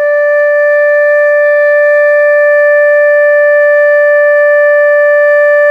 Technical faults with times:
none

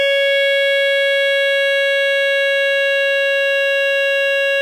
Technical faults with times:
none

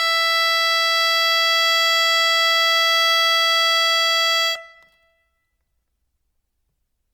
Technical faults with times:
0.00-7.13 generation loss

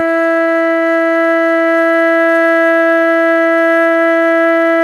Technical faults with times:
0.00-4.83 clock drift between sender and receiver
0.12-4.82 repeated timing corrections
0.22-3.08 scattered short gaps

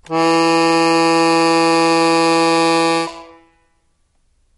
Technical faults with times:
0.00-4.57 MP3 compression

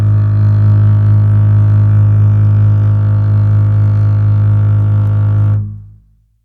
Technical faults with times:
none

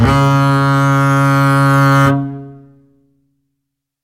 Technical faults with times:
none

